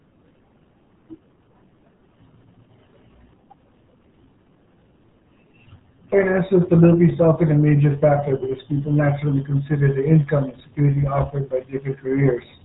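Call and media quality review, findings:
Muffled, gargly speech throughout; no content above 3.8 kHz. RealAudio 14.4 codec, heavy damage, consistent with an 8 kbit/s dial-up-era stream: coarse spectral coding smears the voice.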